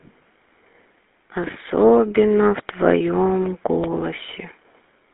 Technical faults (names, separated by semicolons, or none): GSM full-rate codec